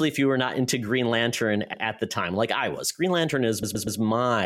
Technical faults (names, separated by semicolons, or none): repeated frames